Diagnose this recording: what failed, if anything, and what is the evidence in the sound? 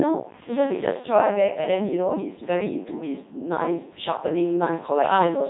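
The failure is at the codec stage: the speech has passed through the Codec 2 vocoder, and the damage is heavy from start to finish. The voice sounds robotic and buzzy, because the decoder rebuilds it from sine waves driven by pitch, voicing and envelope rather than keeping the waveform. There is nothing above 3.9 kHz, and the quality fits Codec 2's top 3.2 kbit/s mode. A plain narrowband telephone codec keeps natural breathiness. Packet-loss robotisation comes and goes, while this synthetic buzz never lets up.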